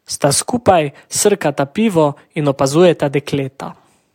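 Nothing goes wrong anywhere in this speech recording; there's simply no technical fault to point to at any moment.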